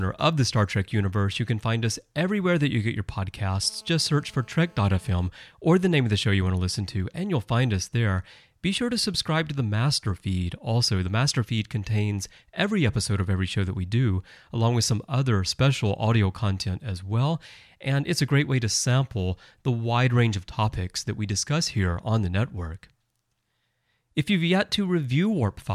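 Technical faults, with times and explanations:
3.62–5.28 s: GSM phone buzz. Just after "that you get your", a hard, raspy buzz at about 217 Hz with a dense stack of harmonics sits under the speech, about 31 dB below it. A nearby 2G phone in a call is transmitting steady bursts that the audio circuit rectifies.
5.38–7.18 s: GSM signalling bursts. Faint even ticks with a longer 217 Hz buzz twice a second, very low in level, run until just before "you'll find us there". The phone's talker has gone silent, so it sends only short burst groups, which the circuit rectifies.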